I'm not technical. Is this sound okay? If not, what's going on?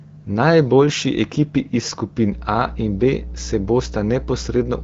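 No. From about 2.32 seconds to the end, a steady, fairly loud low buzz sits under the speech. This is mains hum: electricity from the power line, here at 60 Hz, leaking into the recording, typically through a ground loop or a nearby transformer.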